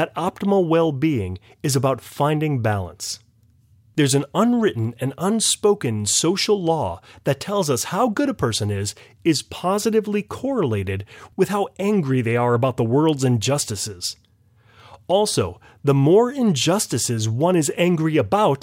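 No technical faults can be heard anywhere in the speech recording. Nothing in it calls for a timestamp or a closer look.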